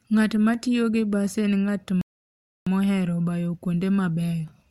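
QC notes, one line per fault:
2.01–2.67 s, rebuffering stall: after "gi bas en ng'at" the speech drops to silence for about 0.65 s, then picks up with "mohero bayo" exactly where it halted. Playback ran dry of downloaded audio and waited for more, so nothing is skipped; the pause is simply added time.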